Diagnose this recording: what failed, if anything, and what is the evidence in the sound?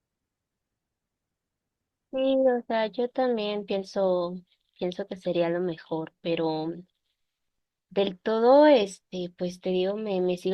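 Nothing failed here as far as I can hear; the speech comes through the whole way with no fault in any stage of the chain.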